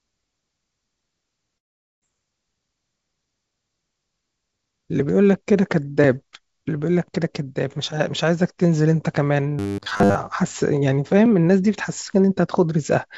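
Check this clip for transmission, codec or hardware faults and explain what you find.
Two transmission faults are audible in this speech clip. It arrives through a call codec whose band stops at 7 kHz, which fits G.722 at 64 kbps.

A long network dropout runs from 1.58 to 2.04 s. Audio likely stopped arriving for about 400 ms. The receiver extended the last sound to cover the gap, then faded it out. For most of that stretch there is near silence. When the speech returns, the missing portion is simply gone. The timing also shifts slightly afterwards.

Robotic sound from repeated short buffers appears from 9.59 to 10.15 s. New audio likely arrived too rarely, so the receiver looped the most recent 10 ms chunk to fill the time. Most of this stretch is repeated material rather than real speech. The loop imposes a steady 100 Hz buzz. The speech turns metallic and mechanical, and it only loosely follows its normal shape.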